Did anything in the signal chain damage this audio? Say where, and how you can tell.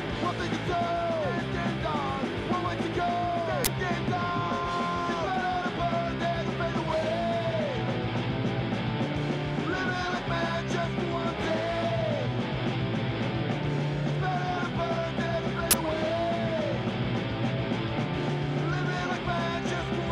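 Yes. The damage is at the driver or buffer stage: two uninitialised buffer faults, from 3.65 to 3.67 s and from 15.71 to 15.73 s. Each is a loud burst of garbage samples lasting about 23 ms, which fits a 1024-sample buffer that played out before audio was written, turning leftover memory into samples.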